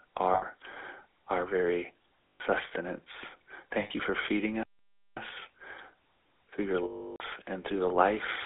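Speech heard through the GSM full-rate codec throughout, which fits a 13 kbps stream: a buzzy, gravelly roughness, with the spectrogram empty below 300 Hz and above 3.6 kHz. Lost GSM frames at 0.34–0.43 s, 2.33–2.41 s after "our very", 3.80–3.91 s before "you for feeding", and 6.84–7.21 s between "through your" and "and through the" hold the last sound as a rough metallic ring, which looks like smeared, repeated bands. A playback stall, likely from the player running out of data, silences the sound from 4.63 to 5.17 s, leaving a flat waveform and a blank spectrogram gap.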